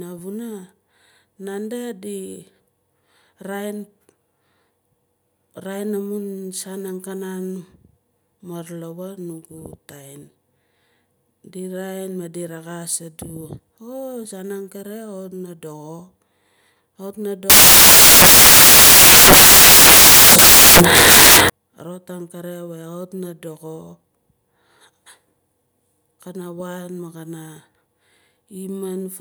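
In this speech recording, from 17.50 to 21.50 s the samples are built from the wrong bytes, with low-order bits read as high, turning the audio into loud, harsh broadband noise for four seconds.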